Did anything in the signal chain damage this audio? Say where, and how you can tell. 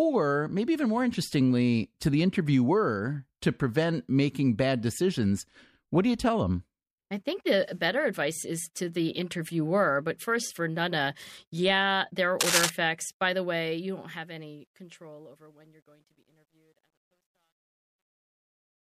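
Yes, three separate problems.

Right before "is to the interviewer", at 8.35 s, there's a quick stutter: one 26.1 ms block plays twice, adding 26.1 ms to the audio. That block length fits a single MP3 frame at 44.1 kHz, so this is repeated frames at the storage or codec stage. A frame got written or sent twice, and the decoder just played it again.

From 12.41 to 12.70 s, just after "yeah there are", a burst of dense, uneven crackle sits over the speech at roughly the same loudness as the speech itself. That's cable scratch noise, and it sounds like it likely comes from the analogue wiring: a worn cable, connector or pot getting moved, with its contact resistance jumping around and injecting ragged noise for that split second.

The fade-out starting around 13.4 s is smooth as a level ramp, but from 13.39 s to the end it carries truncation distortion on a fade. The signal behaves like it's held at only 11 bits with no dither, so as the level drops the waveform collapses into coarse steps. 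It gets properly gritty from about 15.2 s to the end. That points to a sample-format conversion or gain stage that dropped bits.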